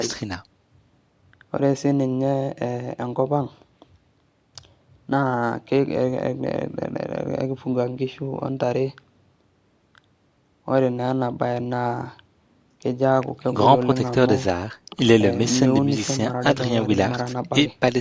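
Nothing stood out on listening to this speech, which has passed through ordinary call microphone processing with its top end stopping around 8 kHz.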